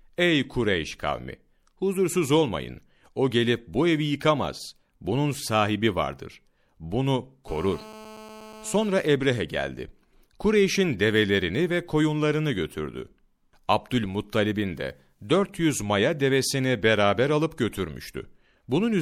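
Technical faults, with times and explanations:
7.48 to 8.88 s, GSM phone buzz: a hard, raspy buzz at about 217 Hz, dense with harmonics, sits about 19 dB below the speech. A nearby 2G phone's call bursts were rectified by the audio circuit. Unlike mains hum, its rate matches no 50 or 60 Hz multiple.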